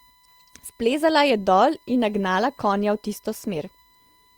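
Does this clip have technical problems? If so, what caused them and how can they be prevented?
Yes. USB whine runs throughout: a steady 1 kHz tone about 35 dB below the speech, from the bus's 1 ms frame current leaking into the audio ground or supply. Prevent it with a powered hub, a ground-loop isolator, or a better-shielded USB interface.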